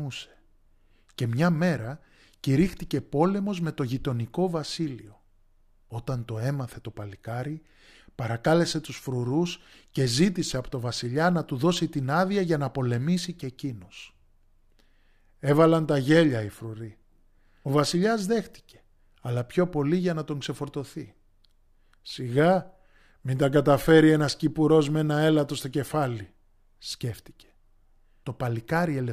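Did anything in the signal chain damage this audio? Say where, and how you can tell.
No, nothing along the chain from capture to playback seems to have harmed this recording, so there's no stage to point to here.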